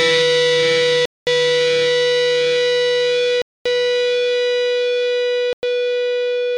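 Everyday sound whose playback drops to dead silence three times and then carries on: from 1.05 to 1.27 s (about 215 ms), from 3.42 to 3.66 s (about 237 ms), and from 5.53 to 5.63 s (about 101 ms). Each gap is a clean cut rather than a fade. This is most likely a Bluetooth stall: radio interference delayed packets, the headphones' buffer emptied, and the audio paused until the retransmitted data arrived.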